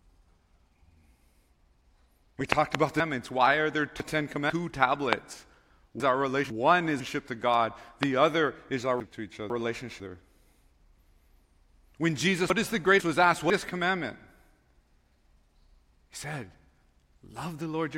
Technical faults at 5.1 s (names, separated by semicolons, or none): loud pop